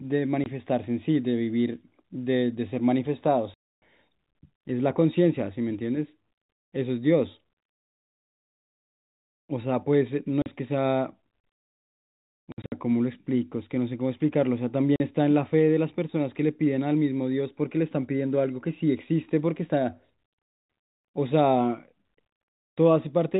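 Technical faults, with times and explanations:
0.44 to 15.0 s, packet loss filled with silence: the audio drops to dead silence at 0.44–0.46, 3.54–3.82, 10.42–10.46, 12.52–12.72 and 14.96–15.0 s. The gaps last 20, 280 and 40 ms. The 12.5 s stretch is a scatter of short holes totalling 140 ms, the longest 60 ms. All are multiples of 20 ms, which fits lost 20 ms packets. The receiver inserts silence rather than concealing the loss, so each hole starts and stops abruptly, above the narrowband G.711 telephone sound.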